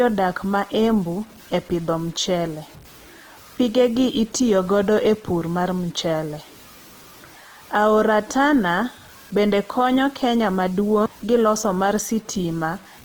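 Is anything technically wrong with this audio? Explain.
Yes, two problems run through the whole speech clip.

The first is low bit depth without dither. The quiet parts of the speech turn gritty, and the grain rises and falls with the voice instead of sitting as a steady hiss. The softest tails sputter or drop out. That's the signature of samples chopped to a coarse grid, with the error tracking the signal. The noise floor sits at only about 30 dB below the speech, which fits truncation to around 7 bits.

The second is Opus compression, and it's plainly audible. The top end isn't cut off, since the band runs all the way up to about 20.1 kHz. The problem is that the voice sounds rough and noisy. Instead of leaving holes, the encoder's music mode fills the bands it can't afford with folded copies of lower bands and shaped noise, so the whole thing comes out grainy. The damage likely comes from a low bitrate, somewhere around 16 kbps.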